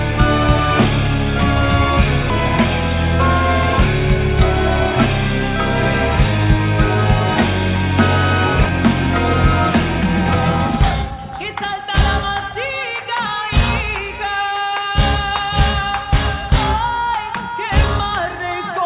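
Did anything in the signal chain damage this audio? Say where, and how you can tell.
Yes. At 2.30 to 2.32 s the audio jumps forward with no gap. About 0.7 s is missing. The jitter buffer skipped ahead, dropping queued audio and splicing both sides.

From 10.65 to 12.51 s the audio runs 6% fast at unchanged pitch. This is a jitter buffer speed-up: it trimmed pitch periods, roughly 150 ms in total, to reduce delay.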